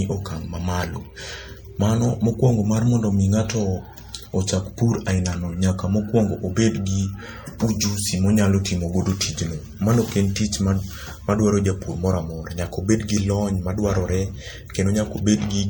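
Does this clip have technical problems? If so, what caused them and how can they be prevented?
Yes. Across the whole speech clip, the sound has the smeared, watery artefacts of a heavily compressed MP3, though the file itself is large. The likely cause is low-bitrate audio saved at a high bitrate, which fits a 64 kbit/s MP3 re-encoded at 192 kbit/s. The second encode kept the first one's damage and could not restore what it had removed. On a spectrogram, the first encode's patchy, blocky gaps remain, and content stops at about 20.2 kHz. To prevent it, encode from the original lossless recording rather than from an earlier lossy copy.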